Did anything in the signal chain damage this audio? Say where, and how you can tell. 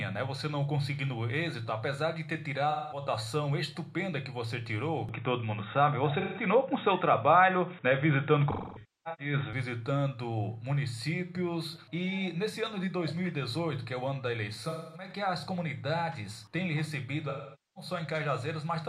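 Yes. AAC frame loss with concealment in the codec/network stage at 2.70–3.02, 6.20–6.43, 8.51–9.33, 14.65–15.09 and 17.29–17.90 s. Each patch turns smeared and noisy as the decoder rebuilds missing frames from the last good spectrum. At 8.51–9.33 s the losses are scattered, with the longest run around 0.3 s.

Input switched to a poorer device, at the capture stage, from 5.09 to 9.53 s. Everything above 3.8 kHz vanishes with no gap, the level shifts by around 5 dB, and a new noise floor appears some 40 dB down. The likely cause is a narrowband headset or second microphone taking over.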